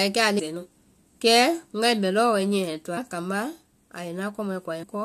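Speech that lurches forward three times: at 0.38 s roughly a fifth of a second of the talk vanishes, at 2.96 s about 150 ms, and at 4.82 s about 100 ms. These are compressed frames skipped. Whole blocks of encoded audio were missing or rejected by the decoder, and each gap fits a whole number of frames of about 21.3 ms.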